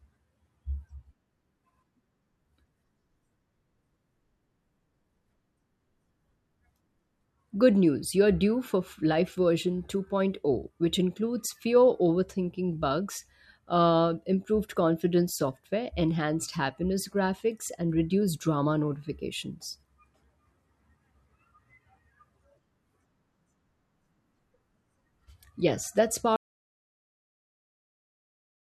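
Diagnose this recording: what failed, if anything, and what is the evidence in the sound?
Input stage: an audio dropout to silence from 26.36 s to the end, speech cut off into silence with no room tone, likely a lost input connection.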